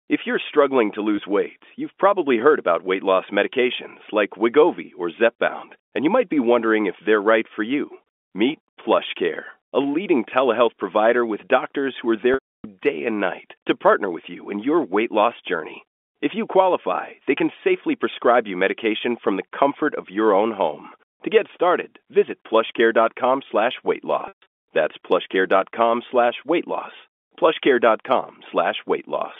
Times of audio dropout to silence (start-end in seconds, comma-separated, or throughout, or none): none